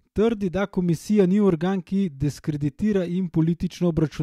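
No technical faults turn up anywhere in this speech recording. Nothing breaks the sound at any point, so there is no event to place in time.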